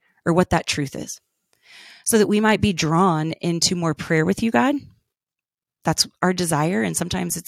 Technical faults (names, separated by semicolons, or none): none